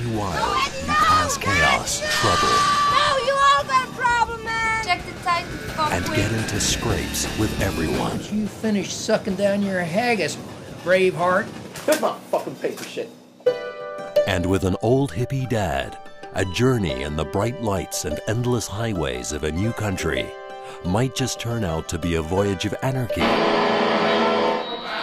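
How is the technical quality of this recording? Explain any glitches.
No glitches or technical faults can be heard anywhere.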